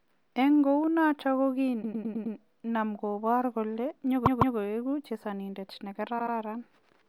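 Repeated frames stutter the speech three times. A 104.5 ms block replays five extra times from 1.82 to 2.34 s. After "kobrogei kole", a 156.7 ms block repeats twice from 4.25 to 4.56 s. After "chesonindet ne", a 78.4 ms block repeats twice from 6.18 to 6.34 s. Unlike an echo, the copies are identical and do not decay, and they lengthen the audio rather than overlapping it.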